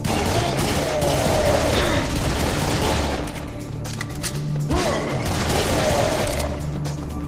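No technical faults are audible.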